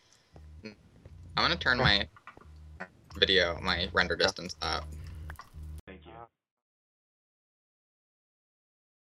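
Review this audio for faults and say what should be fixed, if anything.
At 5.80 s the sound drops out for about 80 ms, then comes back dull and boxy, with nothing above 3.8 kHz, a level about 10 dB lower, and a new, faint noise floor roughly 45 dB down. It stays that way to the end, under the smooth fade-out that runs from around 5.5 s to 6.64 s. The likely cause is the input switching to a poorer device, such as another mic or a headset's call profile. Lock the recording input to one device and turn off automatic switching before you start.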